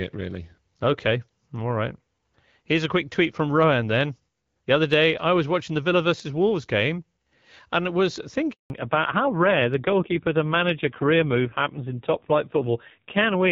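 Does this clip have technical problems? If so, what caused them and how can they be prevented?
Yes. At 8.52 s the speech stops abruptly and stays silent until 8.70 s, a handover gap of 180 ms. This happens when a phone hands the call from one network cell or radio technology to another and no speech frames are delivered while the new link is set up. The decoder fades the signal within a few tens of milliseconds and then has nothing to play, so whatever was said in that interval is gone. It can be prevented by using make-before-break handover with proper jitter-buffer and frame-loss concealment settings on the network side.

From 8.70 s to the end the call shows a fallback to narrowband. Before the gap, the audio carries energy up to about 7 kHz, which fits the AMR-WB HD Voice codec running at 12.65 kbit/s with light coding damage. After the switch, nothing above 4 kHz remains, and the voice sounds duller and rougher. 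This points to the new link negotiating the older AMR-NB codec at a low rate, around 5.9 kbit/s. It can be prevented by ensuring the target network and both handsets support and keep AMR-WB across handover.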